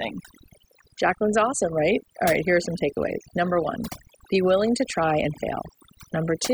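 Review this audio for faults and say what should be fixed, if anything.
Overdone noise removal runs throughout: an over-aggressive denoiser gates bands near its noise estimate, leaving a lowered background with twinkling specks, visible as isolated bright dots scattered across a blank spectrogram floor. Prevent it by lowering the reduction strength and checking quiet speech passages before committing the processing.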